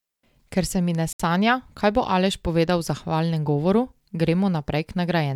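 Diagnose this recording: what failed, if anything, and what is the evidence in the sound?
At 1.13 s, right after "se mi ne", the speech drops to silence for about 70 ms and resumes at 1.20 s with "sanja kaj bo". This is likely a Bluetooth stall at the playback stage: delayed packets let the headphone buffer run empty until retransmissions arrived.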